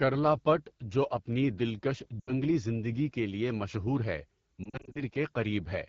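AMR wideband (HD Voice) codec damage runs through the whole of this speech clip: the voice sounds rough and raspy throughout, which fits the low 8.85 kbit/s mode, where the pulse-driven vocal tract model has too few bits to rebuild the voice cleanly below 6.4 kHz and the band above it is only shaped noise. Lost AMR speech frames break in twice. From 2.19 to 2.33 s, after "جو اپنی دلکش" and before "زندگی کے لیے مشہور", about 80 ms of sound is concealed. The decoder repeats the last good pitch and vocal tract settings at falling gain, so the sound smears, sags and returns weak. From 4.64 to 5.01 s, after "کے لیے مشہور ہے", about 160 ms of losses scatter across roughly 320 ms in runs no longer than 40 ms, giving a string of short dips and warbles.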